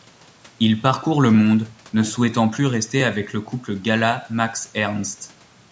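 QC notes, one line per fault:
No faults heard; the call microphone processing sounds normal.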